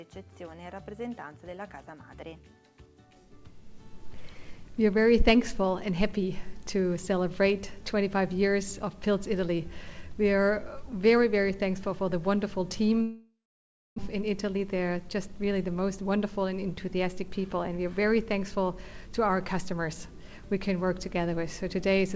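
At 13.02 s there's a long network dropout: the sound smears into a fading buzz, then goes quiet for roughly 0.6 s until 14.00 s, with about 0.6 s likely never delivered. Straight after, from 14.14 s to 17.86 s, a jitter buffer speed-up trims tiny pitch-period slices, so the audio runs about 8% fast at unchanged pitch, clawing back roughly 0.3 s of built-up delay. Underneath it all, the band stops at 8 kHz, which fits a 64 kbps G.722 call path.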